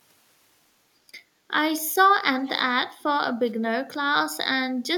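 From 2.38 to 2.56 s a faint, delayed copy of the speech trails the original by about 110 ms, sitting well below it, at roughly 20 dB down. This is an echo leak, likely from a far end on loudspeaker whose echo canceller let part of its microphone pickup through and sent it back. Unlike room reverberation, which smears sound continuously, this is a distinct, separated repeat that appears only briefly.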